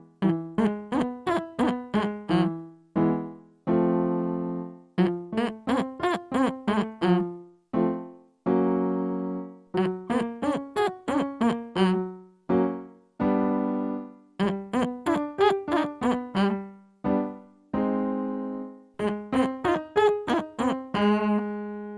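No technical faults are audible.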